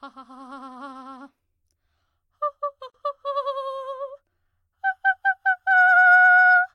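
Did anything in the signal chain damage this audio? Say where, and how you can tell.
Yes, at the codec stage. A gap at a join of encoded pieces silences the music for 42 ms at 2.90 s. Untrimmed encoder padding left it.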